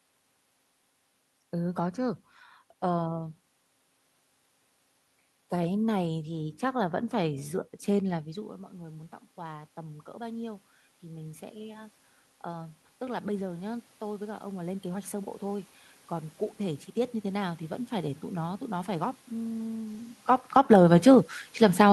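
From 8.24 s to 17.94 s the automatic gain rising fault appears. After the talker moves away around 8 s and the input drops about 16 dB, the gain control climbs slowly by about 13 dB, so the voice creeps back up while the room noise swells with it. A shorter automatic gain rise of about 4 dB follows from 20.67 s to 21.2 s, after another move near 20 s, briefly lifting voice and background together.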